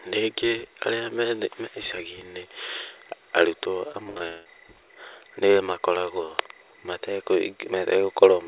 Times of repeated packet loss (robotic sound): 3.92-4.47

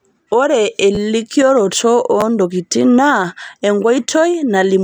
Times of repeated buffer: 0.95-0.98, 2.21-2.23

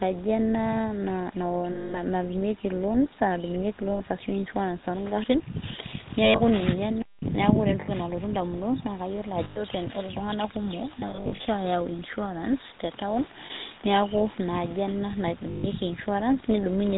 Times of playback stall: 7.01-7.23

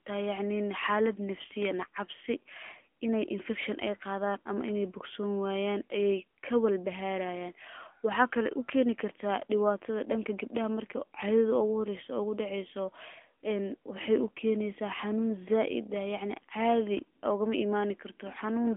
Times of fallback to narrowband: none

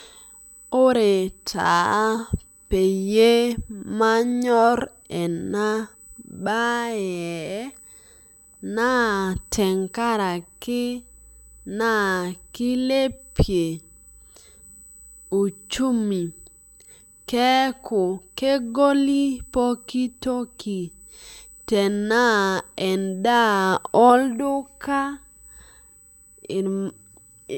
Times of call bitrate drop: none

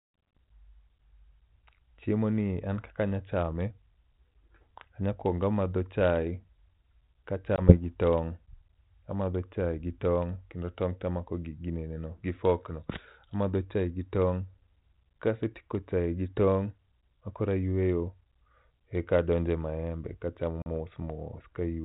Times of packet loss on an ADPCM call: 7.56-7.77, 20.62-20.67

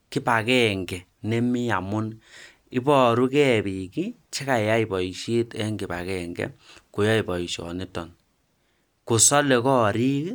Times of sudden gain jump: none

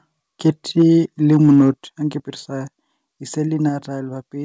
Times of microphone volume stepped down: 0.82, 1.83, 3.69

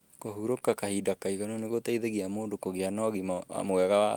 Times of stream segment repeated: none

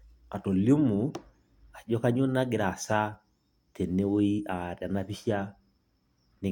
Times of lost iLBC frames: none

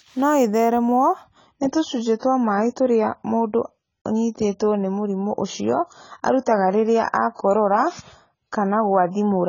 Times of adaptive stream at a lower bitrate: 1.24-9.48

